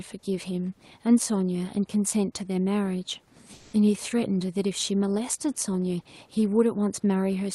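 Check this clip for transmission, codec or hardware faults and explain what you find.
One fault stands out: a short stretch of sound dropped by the voice detector, heard through an Opus-style call path with the top end limited near 12 kHz and steady room noise about 37 dB below the speech.

From 3.55 to 3.71 s, the sender's voice detector likely judged the signal to be background and stopped transmitting, so the receiver filled the gap with comfort noise. About 100 ms of speech is lost, and for roughly 160 ms the audio gives way to steady noise or near silence before the speech returns.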